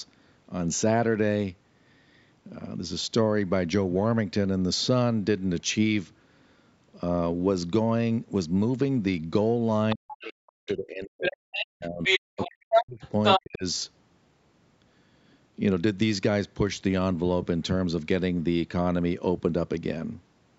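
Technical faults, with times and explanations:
9.90 to 13.41 s, other side's voice leaking through: A second voice shows up three times: faintly at 9.90–10.26 s (about 15 dB under the talker), louder at 11.21–11.66 s (about 5 dB under), and then longest at 12.03–13.41 s, where it sits about 5 dB above the talker. The likely cause is loudspeaker playback reaching the microphone without being fully removed by the echo canceller, so the far end gets partly sent back.
9.94 to 13.64 s, speech suppressed in double talk: The talker is turned down for about three seconds, from 9.94 to 13.03 s, and again briefly at 13.39–13.64 s. At its deepest the level falls by roughly 40 dB. This overlaps the leaking voice, which points to both sides talking at once. The echo canceller likely couldn't tell the near talker from the echo and turned everything down, which takes the wanted speech with it.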